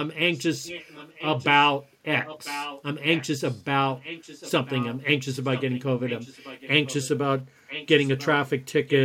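An echo leak runs through the speech at 0.34–1.68 s, 2.24–3.62 s, 3.95–4.98 s, 5.44–7.18 s, 7.67–8.26 s and 8.87–8.96 s. A delayed copy of the speech trails it by about a second (993 ms). It sits about 15 dB below the speech, rising to about 10 dB at 2.24 s and 8.87 s. The likely cause is a far-end loudspeaker whose echo canceller let its microphone pickup through.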